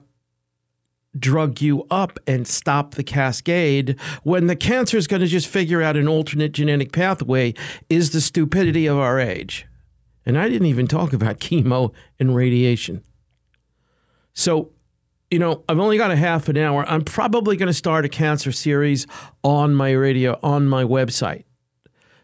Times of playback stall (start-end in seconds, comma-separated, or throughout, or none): none